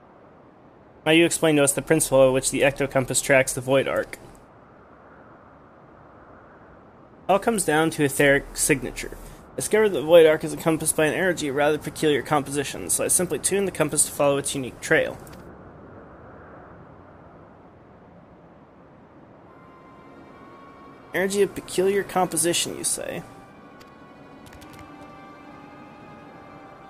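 No technical faults can be heard anywhere in the signal, which stays continuous and intact throughout.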